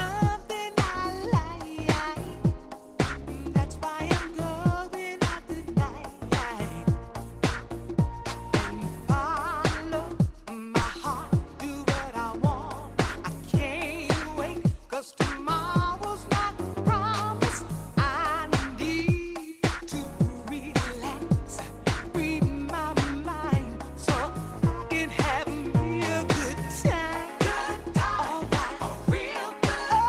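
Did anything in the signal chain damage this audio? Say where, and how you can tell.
Yes: a repeated buffer fault at 2.27, 10.83, 20.04 and 28.43 s, at the driver or buffer stage. Each event is a brief click or buzz as one 5.33 ms slice of sound replays with a hard join, once at 2.27 s, three times at 10.83 s, and twice at 20.04 and 28.43 s. Fresh audio missed its deadline, so the device resent its last block, which fits a 256-sample buffer. Little or no audio appears lost.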